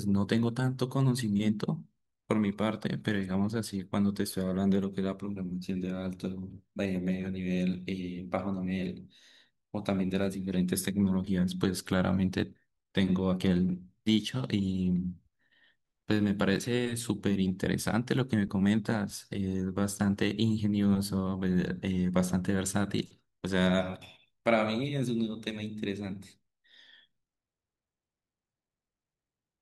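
No technical faults are audible anywhere in the recording.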